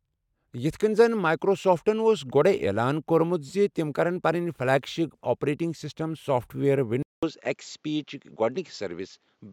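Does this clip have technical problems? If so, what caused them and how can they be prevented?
Yes. Just after "آپریٹنگ سسٹم سافٹ ویئر", at 7.03 s, the speech drops out for 200 ms. From there to the end at 9.52 s it has nothing above 7.5 kHz and a faint new background noise well beneath the voice, while the loudness stays about the same. The likely cause is an input switched to a poorer device. The brief gap and the changed noise floor together set this apart from a plain filter or codec bandwidth drop, which would narrow the sound without a break or new background. To prevent it, lock the recording input to one chosen microphone and disable automatic device switching before starting.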